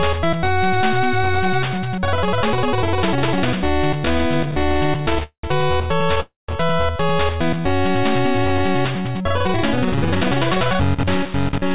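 The audio passed through a call path whose codec leaves nothing above 4 kHz, which fits G.711 mu-law at 64 kbps. Repeated stalls (stutter) run from 4.00 to 5.23 s. Packets arrived late again and again, so the jitter buffer kept emptying. Over twenty brief gaps, none longer than 14 ms, were filled by continuing the last sound. That padding makes up about a fifth of the stretch. Nothing is lost, but the sound drags and stutters. A call audio freeze follows at 5.23 to 5.45 s, and another comes at 6.20 to 6.50 s. Each time the last sound carries on and fades to silence, for 0.1 s and then 0.17 s. The sound then resumes where it stopped. The likely cause is packets held up in transit, which drained the buffer. A jitter buffer slow-down occurs at 7.35 to 7.61 s. Repeated pitch periods add 60 ms, so the sound plays at 81% speed with its pitch unchanged. Jitter buffer speed-up runs at 9.48 to 10.16 s and 10.57 to 11.73 s. 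Trimmed pitch periods push the pace to 104% and then 109%. Roughly 40 ms is removed in the first stretch and about 100 ms in the second, so the second stretch sounds hurried.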